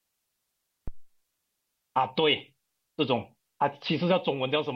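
At 0.88 s there's a phantom power thump: supply switched on or off on a live input, the step punching through the coupling caps as a low thud peaking about -23 dBFS and dying away in roughly 56 ms.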